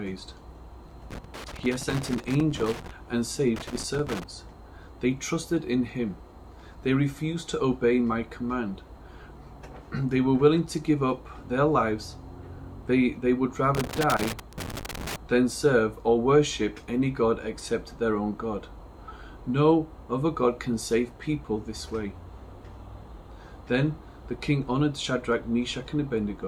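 Loose connector crackle appears at 1.11 to 2.91 s, 3.56 to 4.24 s and 13.75 to 15.16 s. A worn contact intermittently chops the audio, showing as ragged gaps and spikes in the waveform and broadband vertical streaks on a spectrogram.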